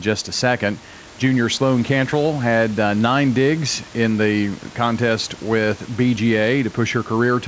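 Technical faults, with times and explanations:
Nothing stood out as a technical fault on listening.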